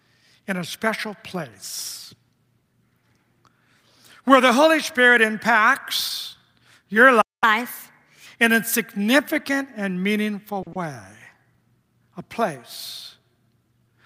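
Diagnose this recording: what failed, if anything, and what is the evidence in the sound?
Playback stage: a playback stall at 7.21 s, just after "impacts your". The output goes silent for about 0.21 s, until 7.44 s, then resumes. The likely cause is a player that ran out of buffered data or had its output thread blocked.

Playback stage: catch-up at higher speed from 7.44 s to 8.26 s, leading into "in a significant and". The player works off its backlog at 1.25 times normal speed, resampling rather than time-stretching, so pitch rises by about four semitones before returning to normal.

Network stage, jitter buffer: a short stall from a late packet at 10.63 to 10.68 s, after "a significant and meaningful". The buffer ran dry, and the receiver held the last sound for 40 ms until the packet arrived. Nothing is lost, but there is an audible overhang.

Network stage, packet loss concealment: short concealed packet loss at 10.73 to 10.77 s, right after the stall. 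About 30 ms never reached the decoder, so the receiver extrapolated from the preceding audio and crossfaded back. The result is a brief smear, and that 30 ms of the original is gone.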